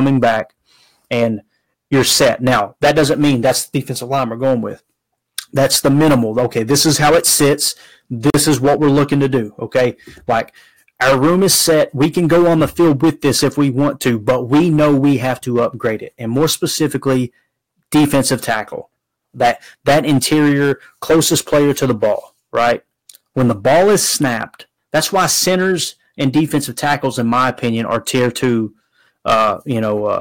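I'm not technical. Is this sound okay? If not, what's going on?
No. Hard clipping runs through the whole recording. The speech was recorded louder than the equipment could handle, so the tops of the loudest moments were sliced flat. That adds a harsh, buzzy fuzz on nearly every strong syllable, all the way through.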